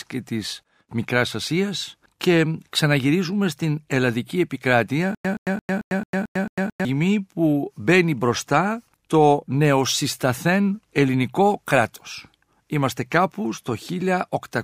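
At 5.15–6.85 s, stutter with silent gaps: the waveform shows one 121 ms burst seven times between flat 100 ms gaps, likely a stalled stream.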